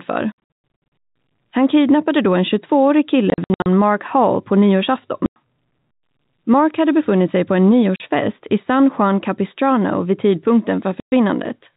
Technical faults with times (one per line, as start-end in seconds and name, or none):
0.32-0.36 packet loss filled with silence
3.30-3.66 packet loss filled with silence
5.26-5.36 packet loss filled with silence
7.96-8.00 packet loss filled with silence
11.00-11.12 packet loss filled with silence